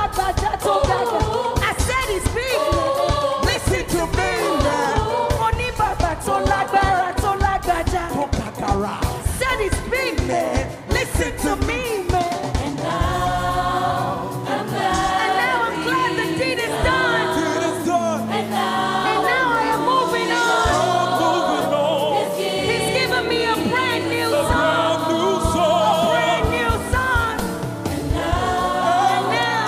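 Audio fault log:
No faults were heard in this audio. Nothing in it calls for an entry in the log.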